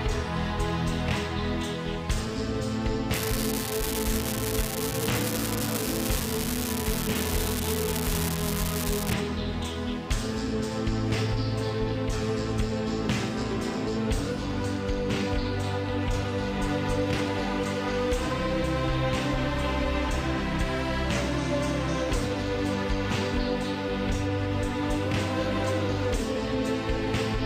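From about 3.14 s to 9.14 s there's an unreliable data bit: one line in the digital path is marginal, so its bit comes out wrong in a random share of samples. Every flipped bit adds a spike of the same fixed size, around -10 dBFS here. You hear it as a steady crackle or fizz that runs straight through the pauses, then stops cleanly at 9.14 s.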